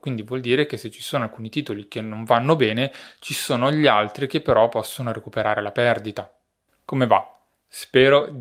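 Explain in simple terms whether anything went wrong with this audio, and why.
Nothing went wrong with this speech recording that a listener would pick up on. No dropouts, glitches or other technical faults can be heard anywhere in it.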